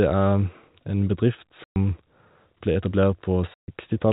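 A speech clip with two abrupt dropouts where the sound cuts to dead silence: one from 1.64 to 1.76 s, lasting 120 ms, and one from 3.54 to 3.68 s, lasting 140 ms. This is packet loss filled with silence. Runs of lost packets left holes the receiver plugged with nothing, and gap lengths that are exact multiples of 20 ms point to 20 ms packets. The narrow telephone band of the G.711 coding is audible throughout.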